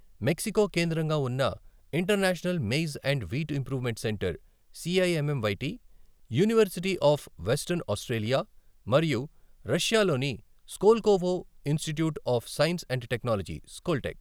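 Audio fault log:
No fault can be heard anywhere in the speech. Nothing in the audio calls for an entry in this log.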